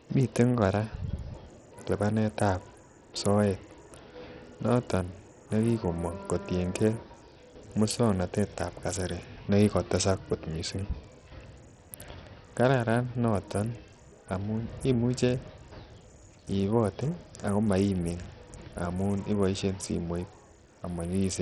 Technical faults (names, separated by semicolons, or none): Bluetooth SBC compression